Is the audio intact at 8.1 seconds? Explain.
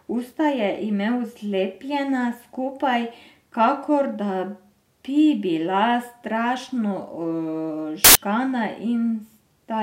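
No. From 8.04 to 8.15 s, samples built from the wrong bytes turn the speech into loud, harsh broadband noise: a dense waveform block and broadband spectrogram smear.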